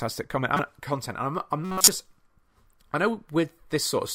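At 0.55 to 0.60 s and again at 1.65 to 1.88 s, a corrupt frame decoded: damaged compressed frames, a few and then several, play through as a chirp, squeak, blip or noise burst, the second reaching higher. On a spectrogram, energy appears at wrong frequencies, breaking off at frame boundaries.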